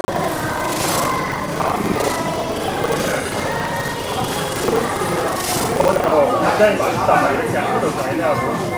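From the start to 6.15 s, the everyday sounds carry buffer tearing. The program filling the ring buffer and the hardware reading it have drifted out of step. Their positions cross inside every period. Most of each buffer plays audio from one lap earlier, around 70 ms old, with hard joins on both sides. The result is a steady robotic rattle at 25 Hz. That rate points to a 40 ms buffer period. The buzz rides on the sound itself and stops after 6.15 s.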